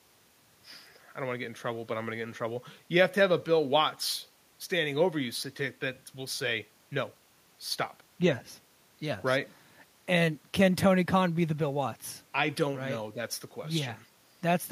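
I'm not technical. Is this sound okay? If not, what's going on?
Yes, this speech recording sounds fine, and nothing in it stands out as a technical problem.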